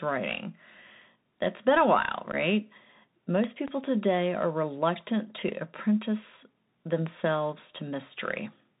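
The whole clip runs through a Bluetooth CVSD headset codec. It's cut off around 4 kHz, s sounds turn scratchy, and a grainy hiss sits under the speech. At 2.32 to 2.35 s, right after "that's been a while", there's unconcealed Bluetooth headset packet loss: about 11 ms gone, which fits a few dropped packets, leaving an abrupt hole. Then come loud pops, likely plug or static glitches. Two land between 3.44 and 3.70 s, just before "today are reluctant", and one at 7.07 to 7.09 s, each about 10 dB above the speech.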